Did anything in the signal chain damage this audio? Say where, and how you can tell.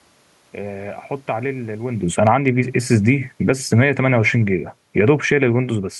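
Yes. The automatic gain control in the call processing stage pulls the level down between 1.28 and 5.44 s, about 10 dB in total. The room noise sinks along with the speech, so the gain stage itself is reducing level after judging the input too loud.

Automatic gain rising appears twice inside that descent, 2.38 to 2.85 s (about 6 dB) and 3.91 to 4.39 s (about 4 dB). Speech and background swell together over roughly half a second each, unlike the talker moving near 2 s, which changes only the voice.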